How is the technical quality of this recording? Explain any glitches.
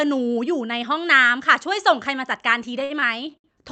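The recording carries one glitch, near the end. It has passed through a call codec, likely Opus, which limits the top end to about 8 kHz.

From 2.79 to 3.46 s there are repeated stalls (stutter): packets arrived late, the jitter buffer ran dry four times, and the receiver stretched the last sound to cover about 153 ms, the longest gap being 67 ms. Nothing is lost, but the speech drags and hiccups.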